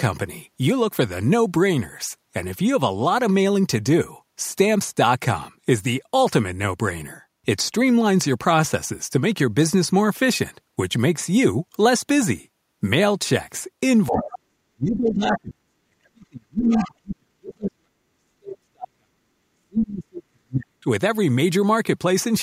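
From 14.08 to 19.2 s, speech is suppressed in double talk. The level drops deeply, by roughly 40 dB at worst, likely because the echo canceller turned down both overlapping talkers. At 14.16 to 14.39 s and again at 16.65 to 16.88 s, the other side's voice leaks through. It comes as brief scraps, roughly 10 dB and then 15 dB below the speech, likely loudspeaker echo the canceller missed. The suppression returns from 19.54 to 20.87 s.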